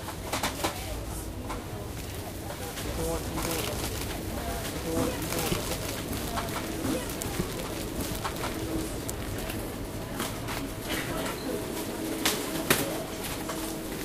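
A second copy of the audio was likely captured through a slower path and mixed back in, producing a doubled audio track from 2.84 s to 9.48 s. The copy trails the original by about two seconds and sits at roughly the same level, so every event is heard again, full-band and dry, with no decay or room colour. The duplicate cuts in abruptly at 2.84 s and drops out just as suddenly at 9.48 s.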